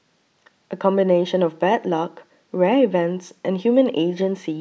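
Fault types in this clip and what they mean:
No technical fault can be heard anywhere in the clip. The speech comes through without any audible problem to list here.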